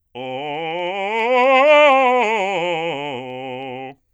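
From 0.14 s to 4.11 s, clock slip clicks tick through the music about every 70 ms, around fifty forming a light rattle. Likely cause: unsynchronised clocks a few hundred ppm apart, each slipping one sample. Unlike buffer dropouts, there are no gaps, and spacing stays even.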